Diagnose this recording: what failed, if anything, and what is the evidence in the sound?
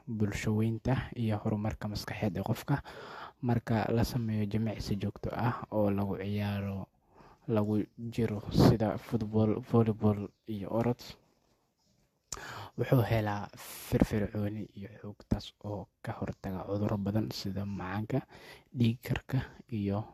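Throughout the speech, two different kinds of coding smear sit on top of each other, and nothing is present above 14 kHz. The codec stage likely failed through transcoding between lossy codecs: Vorbis re-encoded as AAC-LC at rates near 64 kbit/s, stacking both codecs' artefacts.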